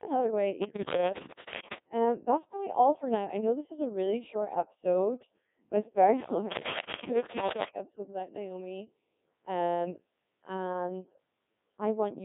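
Codec 2 vocoder damage runs through the whole speech clip: the decoder rebuilds the voice from sine waves using only pitch, voicing, energy and spectral envelope, so it sounds heavily robotic and buzzy, band-limited to 150 Hz to 3.6 kHz, which fits a rate near 1.6 kbit/s.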